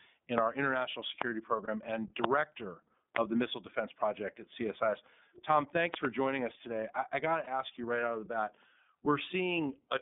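Speech heard through the iLBC codec, band-limited to roughly 200 Hz to 3.6 kHz, with the rough, slightly synthetic texture of its frame-by-frame excitation coding plainly audible. Unlike a simple telephone filter, the damage is a grainy, buzzy quality within the band, not just dullness. The sound fits iLBC's 13.33 kbps mode with 30 ms frames.

Loud pops, about 20 dB above the speech, sit on top of the audio at 0.38–0.40 s (just before "our international"), 1.22–1.24 s (just after "in our international") and 3.16–3.18 s. At 5.94–6.07 s there are two in quick succession, just before "joining us today I". Each is a sharp click with the speech continuing underneath. That sets them apart from dropouts, where the sound itself is interrupted. The likely cause is a voltage step or spike from a plug, switch, static discharge or driver glitch.

Lost iLBC frames occur at 1.64–1.69 s and 7.43–7.47 s. 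Each is a brief held, buzzy smear where the decoder repeated the last pitch cycle mixed with noise, which fits a single missing 30 ms frame. The voice is correct again almost immediately, since each iLBC frame decodes independently. It is a smeared vowel-like hold rather than a click, so it is not confused with the pops.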